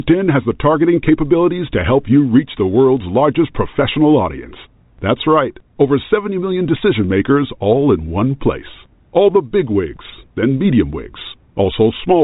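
No faults are present in this speech, which comes through G.711 telephone coding with the usual narrow band that stops near 3.8 kHz.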